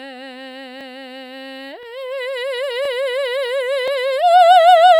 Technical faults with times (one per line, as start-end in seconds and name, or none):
0.81-0.83 overlapping chunks
1.83-1.85 overlapping chunks
2.85-2.88 overlapping chunks
3.88-3.90 overlapping chunks